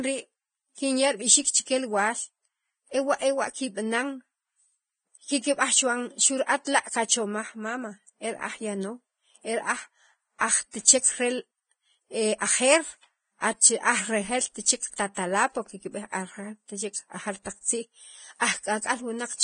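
Speech with heavy, grainy treble and nothing above 9.7 kHz, likely Vorbis compression at a low bitrate around 22 kbps, which coarsely quantises the high band. Pre-echo appears as brief hiss smeared ahead of attacks at 6.65–6.67 s, 14.91–14.93 s, 15.15–15.17 s and 18.4 s, where block-wide quantisation noise leaks before each transient.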